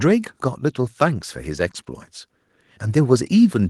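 From 2.65 s to the end, automatic gain rising: the gain control judged the input too quiet and lifted it, so voice and background swell together.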